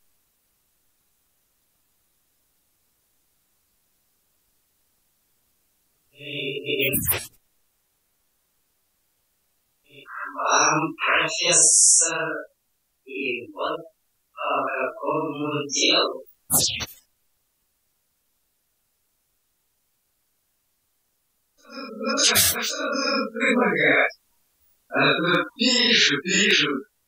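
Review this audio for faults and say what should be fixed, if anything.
Two single sharp clicks sit at 25.35 s and 26.51 s. They are likely dropped samples: a handful of samples, well under a tenth of a millisecond, go missing, so the waveform jumps straight to a later value. Unlike a dropout, no sound audibly disappears. Keeping the capture and processing buffers from underrunning would prevent it.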